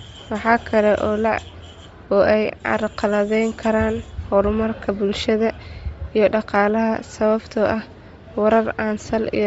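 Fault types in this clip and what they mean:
Bluetooth LC3 compression: present throughout the speech, with a breathy, grainy edge and a thinned, noisy top end that is plainly audible. This sound is likely from LC3, the Bluetooth LE Audio transform codec, squeezed to a low rate. It drops much of the upper spectrum and fills the gaps with shaped noise, in short blocks. The character fits short 7.5 ms frames at around 32 kbps.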